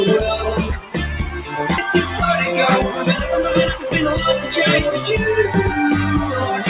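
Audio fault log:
0.80–0.96 s, sound cut by the noise suppressor: for about a sixth of a second the level sinks by up to about 11 dB, because the suppressor judged this stretch to be noise. Unlike a dropout, the sound thins and fades rather than vanishing, and sharp onsets survive.
1.78–1.80 s, skip ahead: roughly a second of audio is simply missing. Later audio was already queued, so playback jumps straight to it with no silence or filler, which sets it apart from a gap or concealment. Both sides are joined almost directly through the G.711 call path, whose band stops at 4 kHz.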